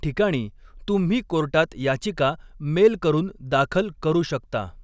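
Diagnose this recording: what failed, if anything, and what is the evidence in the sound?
Nothing in the signal chain failed: no stage in this speech recording shows an audible fault.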